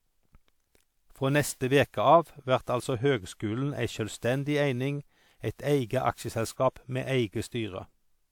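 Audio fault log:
Throughout, generation loss: speech sounds swirly, hollow and smeared beyond what its 128 kbit/s WMA quality explains, likely from roughly four re-encodings compounding artefacts.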